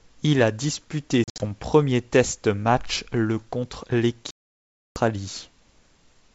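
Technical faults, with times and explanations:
1.24 to 1.46 s, packet loss on an ADPCM call: about 120 ms of audio drops out in several hard-edged silent holes scattered over 160 ms, the longest lasting 60 ms, which points to roughly seven lost packets. Each time the speech returns, the decoder's predictor and step size no longer match the sender's, so it comes back slightly distorted before settling. Those brief, clipped gaps and rough re-entries separate it from a stall.
4.31 to 4.96 s, playback stall: the speech halts mid-flow and the output stays silent for 654 ms as a single unbroken gap. That clean pause, far longer than any packet hole, is likely caused by the player running out of data or its thread being blocked until it recovered. The G.722 wideband coding carrying the call adds at most a faint hiss.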